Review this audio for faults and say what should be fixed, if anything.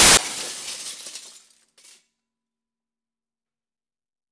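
File tags played as audio, 0.0 to 0.17 s: an embedded cover picture, compressed data, was decoded as samples, giving a hard-edged burst of very loud white noise. Skip metadata blocks before decoding so only real audio frames reach the player.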